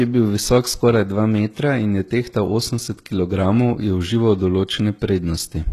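Throughout, s sounds turn gritty and lispy, likely from HE-AAC compression rebuilding the treble by band replication. A spectrogram shows copied upper bands stopping at 12.4 kHz.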